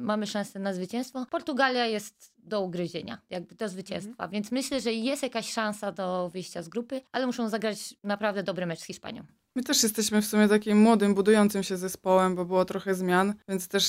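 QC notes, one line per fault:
Nothing to flag here; I listened all the way through and didn't hear anything worth a note.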